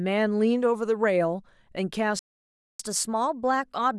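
At 2.19 s the speech halts mid-flow and the output goes fully silent for about 0.60 s, until 2.79 s. This is a playback stall, likely the player running short of data or its thread being blocked.

From 2.79 s to the end, the speech runs at 1.1 times normal speed as the player resamples its backlog to win back some of the lost time. This catch-up at higher speed raises the pitch by roughly one and a half semitones along with the tempo, which sets it apart from a pitch-preserving time-stretch.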